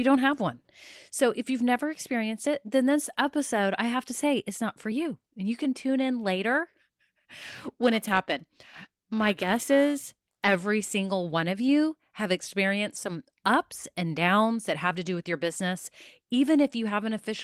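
From 7.42 to 10.56 s the speech takes on a rough, metallic edge that drops away in the pauses. This is periodic clock jitter: interference wobbles the converter's clock at around 1 kHz, spraying sidebands at that spacing around every component, hardest on higher frequencies.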